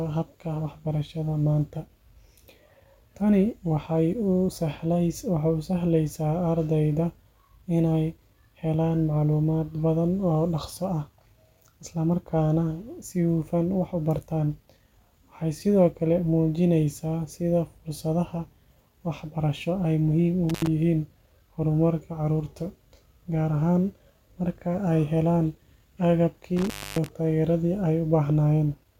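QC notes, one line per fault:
20.49–20.67 s and 26.57–27.09 s, intermittent contact: the speech drops out twice with crackle at each edge, the line open for about 75 ms in the first event and 266 ms in the second, leaving faint hiss during the gaps. A loose plug or cable connection is briefly breaking the signal path, and the scraping of the contacts as they part and reconnect produces the crackle.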